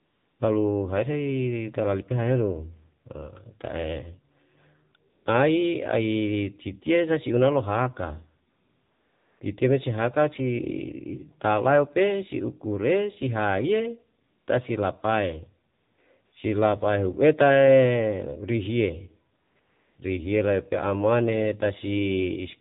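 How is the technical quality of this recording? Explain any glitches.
The recording has clear technical faults. The speech passed through a low-rate mobile codec, and several pauses are filled with synthetic background.

Throughout the clip, AMR narrowband mobile codec damage is plainly audible. Nothing above 4 kHz survives, and the voice sounds buzzy and synthetic, which fits one of the lower AMR-NB modes at around 7.4 kbps. The codec rebuilds each 20 ms frame from a vocal-tract model excited by a few pulses. That is why the damage is a synthetic buzz, unlike the smeared, underwater ringing of a music codec starved of bits.

AMR comfort noise fills eight gaps: 0.0 to 0.4 s, 5.10 to 5.26 s, 8.50 to 9.40 s, 14.24 to 14.48 s, 15.74 to 15.98 s, 16.26 to 16.32 s, 19.38 to 19.56 s and 19.60 to 19.98 s. The sender judged these moments silent and stopped sending speech frames. The receiver then generated smooth, steady noise from a coarse level and spectrum estimate. 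These gaps differ from dropouts, which fall to dead silence, because here a uniform hiss switches in and out instead. The longest gap, at 8.50 s, lasts 900 ms.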